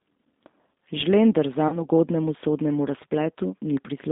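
The whole clip runs through the G.729 codec at 8 kbit/s, so the speech is squeezed into roughly 200 Hz to 3.7 kHz and sounds noticeably rough and synthetic. Around 1.68 to 1.86 s, right before "ugodnemu sodnemu", there's VoIP packet loss concealed by the speech codec. About 40 ms went missing, which fits two lost packets, and the decoder stretched the previous sound into a fading buzzy tone or coloured noise that stays weak for a bit afterwards.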